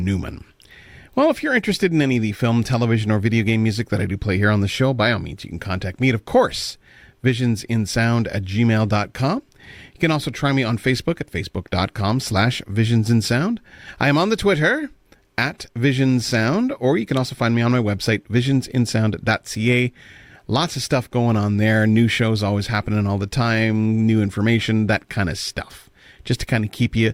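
No audible technical faults anywhere in the speech recording.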